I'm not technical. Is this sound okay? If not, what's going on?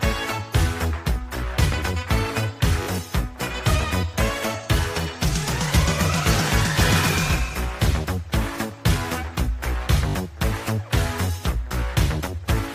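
No. At 2.83 and 10.09 seconds the sound briefly buzzes, as a tiny slice repeats like a skipping record. This is Bluetooth stutter: wireless data was lost or arrived late, so the receiver replayed its last bit, then jumped ahead, skipping about 41 and 61 milliseconds.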